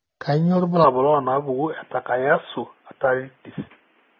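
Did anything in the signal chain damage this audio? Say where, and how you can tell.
Yes. At the codec stage, the speech was likely encoded as AAC compression at a low rate, consistent with about 24 kbps AAC-LC. Throughout the clip the high end is thinned and smeared, with a warbling, fizzy texture on sibilants and sustained sounds where coarse quantisation leaves gaps in the spectrum.

At the input stage, from 0.84 s to the end, the input switched to a poorer device, likely a headset or lower-grade microphone. With no gap and no level jump, the sound suddenly turns dull and boxy, with nothing above 3.5 kHz and a faint new noise floor roughly 40 dB down.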